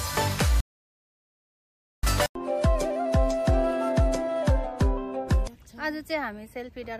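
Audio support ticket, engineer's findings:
Playback stall, 0.60 to 2.03 s. Output drops to full silence mid-flow for about 1.43 s, then sound continues. Likely cause: player starved of data or output thread blocked. Unlike a brief dropout or click, this is one long, clean silent gap.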